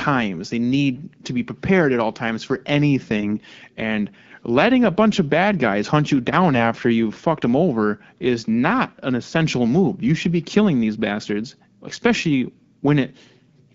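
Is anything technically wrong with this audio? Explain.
Yes. From 3.16 to 3.24 s, just after "at all times for", the speech turns briefly scratchy and gargly. These are AMR bit errors: a few percent of unprotected frame bits flipped, misplacing excitation pulses and detuning pitch, gain and spectrum values, over a stretch that fits about four frames of the 12.65 kbit/s AMR-WB stream.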